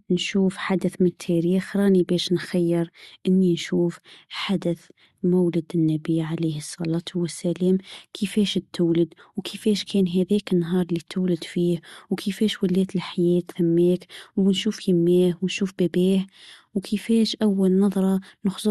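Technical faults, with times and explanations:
Nothing stood out on listening to this speech.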